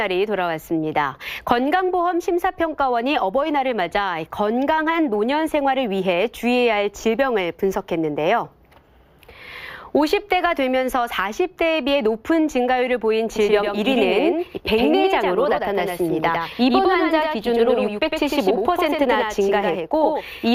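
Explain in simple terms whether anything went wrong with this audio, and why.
From 13.36 s to the end, a doubled audio track appears: a second, somewhat quieter copy of the same sound trails about a tenth of a second behind, starting abruptly. This is likely the audio being captured twice, once through a slower path.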